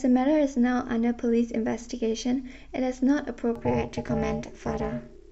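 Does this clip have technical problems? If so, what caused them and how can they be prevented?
Yes. From 3.56 s to the end, overlap-add ripple: frames rejoin with uneven gain, so level pumps about 60 dB at roughly 400 Hz, a harsh robotic buzz. Use windows that sum to constant gain.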